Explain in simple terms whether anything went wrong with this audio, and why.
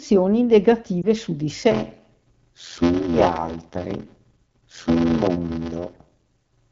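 At about 1.02 to 1.06 s, radio errors corrupted one 20 ms packet of speech, a fault called lost AMR speech frames. The phone's decoder filled the hole by repeating the last good sound more quietly, so you hear a brief dip or warble.

From 1.71 s to the end, there is a block size mismatch (padded). One part of the system handed over shorter chunks of audio than the next part expected, which fits a 512-sample read, and each shortfall was filled with silence. This causes a steady buzz at about 86 Hz, and the audio plays slower, at 0.625 times normal speed, while the pitch stays roughly the same.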